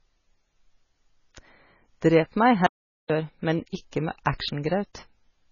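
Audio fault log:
throughout: low-bitrate audio saved at a high bitrate. Nothing is present above 7.1 kHz, which fits a very low-bitrate MP3 likely re-encoded at a high bitrate. The second pass could not restore the removed content.
2.66–3.10 s: audio dropout to silence. The sound cuts to 0.43 s of silence with no room tone, then resumes at "men ikke". The likely cause is lost input while zeros kept being written.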